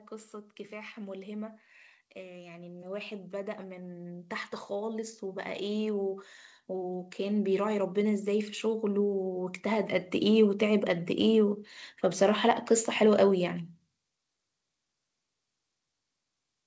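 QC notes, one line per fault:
2.14–9.94 s, automatic gain rising: the gain control judges the input too quiet and lifts it gradually, by about 17 dB over nearly eight seconds. Background noise swells with the speech, marking this as gain control rather than a talker moving closer.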